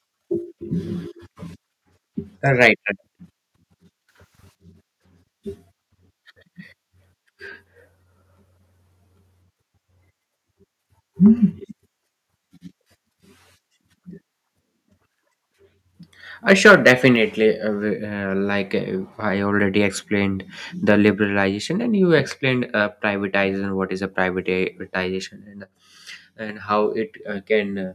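At 2.61 to 2.68 s the input level was likely set too high, a microphone overload driving peaks about 4 dB past the converter's ceiling. A few percent of samples have their tops flattened, giving a harsh crackle. From 4.09 to 4.55 s a sudden gain jump, likely an unramped digital gain change, lifts everything by 12 dB at once, sound and background noise together. From 16.5 to 17.08 s a second microphone overload, likely the same excessive input gain, pushes peaks about 6 dB over the limit, clipping a couple of percent of samples into a gritty, distorted edge. At 17.16 s the microphone volume is stepped down, likely by call software reacting to that clipping, dropping sound and background together by about 4 dB. From 25.64 to 26.49 s another sudden gain jump, likely an abrupt digital gain change, cuts the level by 6 dB, noise floor included.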